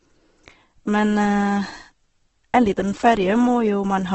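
The speech has most likely been through Opus compression at a very low bitrate, which fits a rate of about 12 kbps in the music-oriented CELT mode. Starved of bits, the encoder keeps each band's energy but fills the detail with folded or noise-like content, so from start to finish the voice sounds rough, grainy and hissy rather than swirly. The band is also cut to wideband, with nothing above 8.2 kHz, leaving the top dull.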